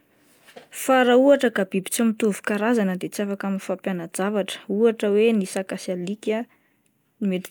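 No technical faults are audible.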